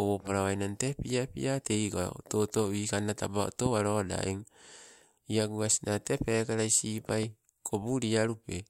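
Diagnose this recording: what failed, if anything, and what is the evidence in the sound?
Loud pops point to an analogue wiring fault. A single sharp pop hits at 3.66 to 3.68 s, about 15 dB above the speech. A double pop follows at 7.09 to 7.26 s, about 10 dB up. Speech continues underneath. A voltage step from a plug or switch is the likely source.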